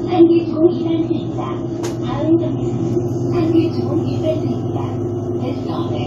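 From 3.09 to 5.87 s, sample clock jitter from an unsteady converter clock adds hiss swelling on loud, bright sounds; spectrograms show faint broadband haze there.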